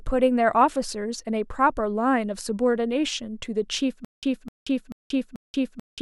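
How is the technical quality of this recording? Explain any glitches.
A glitch cuts the speech short. From 4.05 s to the end, a stutter with silent gaps appears: the same 256 ms fragment repeats four times, each followed by about 182 ms of digital silence, every 437 ms. The likely cause is a playback stall replaying its last buffer on each retry. The repeated burst is what sets it apart from simple dropouts, and the true silence between repeats is what sets it apart from a seamless loop. The speech that belonged there is lost.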